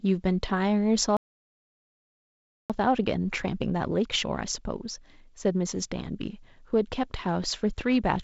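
At 1.17 s the speech cuts out in mid-flow and the output stays silent until 2.70 s, a gap of about 1.53 s. This is a playback stall, most likely from the player running out of buffered data or having its audio thread blocked. On a waveform it shows as a flat line of silence. A spectrogram shows a blank vertical band across all frequencies, up to the ceiling of about 7 kHz that the G.722 wideband coding sets for the whole clip.

From 2.70 s to 5.70 s comes a time-compressed catch-up, as the player works off the backlog from the stall. It cuts out small slices and cross-fades the joins, so the speech runs at about 1.15 times normal speed while the pitch stays where it was. The talk sounds hurried. A spectrogram shows the harmonics at unchanged heights, but syllables packed closer together, with small smears at the joins.

From 7.44 s to the end at 8.24 s, a train of clicks ticks over the audio at about 2.3 per second, unevenly spaced. 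They peak only a little above the speech level and stay audible in the pauses. The likely source is interference from nearby equipment or a faulty connection or power supply. On the waveform they are narrow spikes of similar shape. In a spectrogram each appears as a thin vertical line running across the band.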